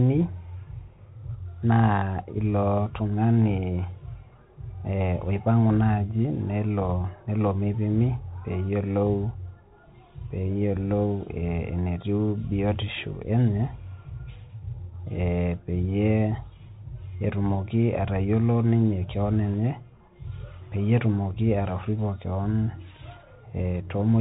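From start to finish the speech sounds boxed in, with nothing above 3.8 kHz. S sounds turn scratchy, a granular hiss sits underneath, and loud high passages fray. This is the Bluetooth CVSD headset codec, a one-bit up-or-down stream that fits 64 kbps, whose adaptive step can't keep pace.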